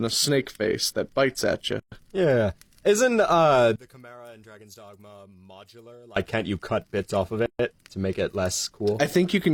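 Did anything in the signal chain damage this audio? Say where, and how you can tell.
Yes. The speech stops dead twice in mid-flow: about 123 ms of silence from 1.80 to 1.92 s, and about 135 ms from 7.46 to 7.59 s. Each time it resumes exactly where it stopped. That is a gap at a join of encoded pieces. It arises at the codec or editing stage, where segments encoded separately were butted together without trimming each run's leading encoder delay and final-frame padding.

From 3.76 to 6.16 s the speech drops by about 25 dB and turns faint, as though only the stereo difference remains. This is likely one channel inverted, probably from a polarity-reversed connection or mix path, so the centred speech common to both channels cancels when they are summed to mono.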